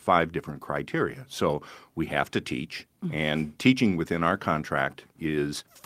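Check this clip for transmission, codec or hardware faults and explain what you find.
Nothing in the speech points to a transmission, codec or hardware problem. No dropout, distortion or other disturbance can be heard anywhere in the recording.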